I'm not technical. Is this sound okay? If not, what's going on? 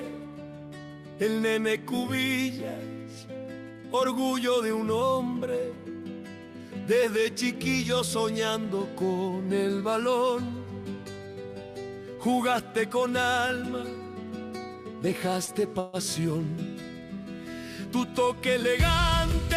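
No. Late-arriving pieces of the call stream cause three problems in the second half.

A short stall from a late packet happens twice, at 13.47 s and 15.45 s. Each time the next piece of audio wasn't there when it was due, so the receiver held the last sound for about 20 ms until it arrived. Nothing is lost, but the sound drags for a moment, with a slight buzz or dip.

At 15.80 s the sound freezes for about 140 ms, until 15.96 s. That is a call audio freeze, likely from pieces of the stream held up on the way. Instead of going silent, the last sound is stretched into a fading buzz or hiss. Then the audio picks up exactly where it stopped, so there is a gap but nothing is missing.

From 17.95 s to 18.69 s there is a jitter buffer speed-up. After the delays, the receiver had more audio stored than it wanted. To catch up, it cut out tiny slivers, about 40 ms in all. The pitch stays the same, but for that stretch the sound runs at 105% speed and comes across as hurried.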